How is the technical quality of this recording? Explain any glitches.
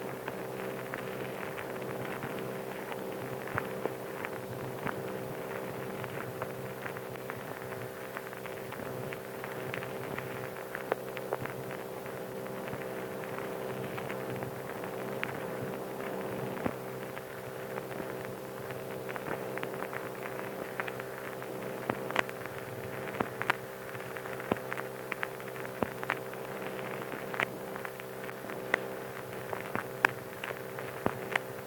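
No glitches are audible: nothing in the recording breaks up, drops out or distorts at any point.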